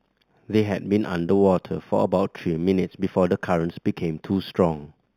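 Throughout the speech, imaging from linear upsampling is audible. The rate appears to have been raised from 8 kHz to 44.1 kHz by straight-line interpolation. The top of the band is dulled, and a mirrored copy between 4 kHz and 8 kHz, roughly 30 dB down, adds a faint metallic shimmer to sibilants.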